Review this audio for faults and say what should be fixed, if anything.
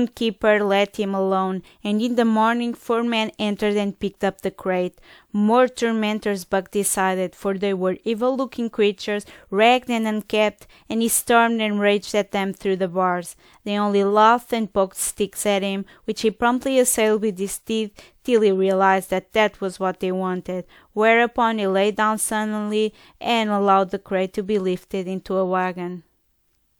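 Nothing here needs fixing; I listened through and didn't catch any technical faults worth flagging.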